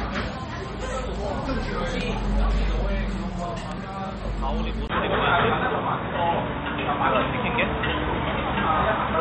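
From the start, the sound is dull, with nothing above 8.3 kHz. It has a watery swirl and smeared attacks, likely from MP3 compression at about 32 kbps.

At 4.88 s, a 20 ms gap is followed by a narrower, boxier sound with nothing above 3.8 kHz. The level shifts by a few dB and faint new noise appears. The input likely switched to a poorer device.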